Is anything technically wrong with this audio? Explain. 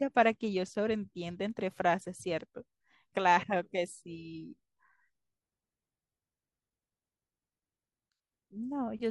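No, nothing technically wrong can be heard here.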